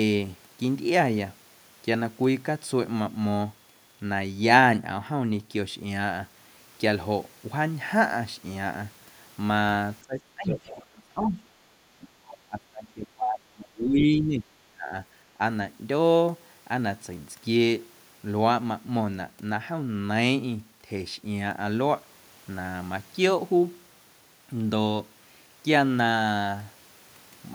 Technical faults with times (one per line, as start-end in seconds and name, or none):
10.03-11.40 speech suppressed in double talk
10.50-10.85 other side's voice leaking through
11.99-14.94 speech suppressed in double talk